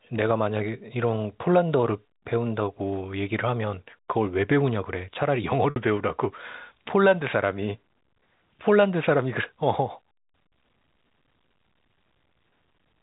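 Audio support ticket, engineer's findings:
Packet loss with pitch repetition, 5.70–5.76 s: about 60 ms gap, fitting three 20 ms packets, bridged by looping the last pitch period so the sound holds briefly with a buzzy tone and fades rather than dropping to silence or clicking. Band-limited G.711 path shows faint coding noise only.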